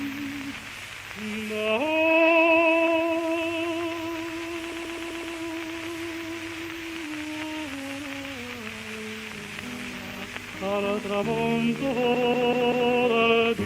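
From 4.72 to 5.36 s, repeated frames replay a 128 ms block five extra times. From 12.14 to 12.91 s a 192 ms block plays four more. Resent compressed frames cause a rhythmic stutter, visible as identical, evenly tiled spectrogram slices.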